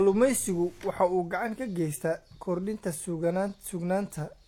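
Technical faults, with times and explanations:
Throughout, transcoding between lossy codecs: the speech carries two overlapping sets of coding artefacts and nothing above 18.4 kHz. The likely cause is an MP3 near 96 kbit/s re-encoded as HE-AAC near 40 kbit/s. A spectrogram shows a hard ceiling and patchy upper-band texture.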